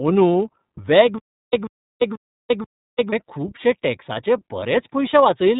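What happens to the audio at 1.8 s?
At 1.8 s the audio is caught in a stutter with silent gaps. From 1.18 s to 3.13 s, a short burst of about 138 ms plays, drops into roughly 350 ms of dead digital silence, and returns unchanged, four times at a steady beat of about 0.49 s, before normal playback resumes on "खुबशें टॅक्साचे". The likely cause is a stalled player or stream that replayed its last buffered fragment on each retry and then ran dry. Whatever should have played during that span is gone.

Across this moment, as throughout, the sound also carries iLBC codec damage. It is band-limited, with nothing above about 3.8 kHz, and has a plainly audible rough, slightly synthetic texture. Each 30 ms frame's excitation is coded on its own, without help from the frame before. The dull, thin top end and the graininess fit iLBC's narrowband 30 ms mode, around 13.3 kbps.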